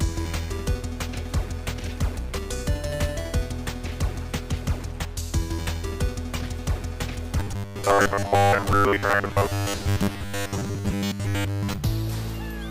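Robotic sound from repeated short buffers, 7.40 to 11.78 s: a rigid metallic buzz at 100 Hz, likely from 10 ms chunks looping in place of most of the missing audio.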